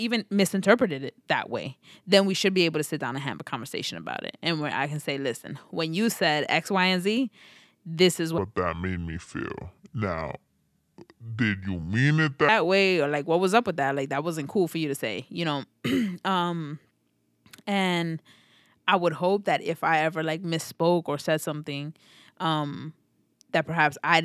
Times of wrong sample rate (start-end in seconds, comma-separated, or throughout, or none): 8.38-12.49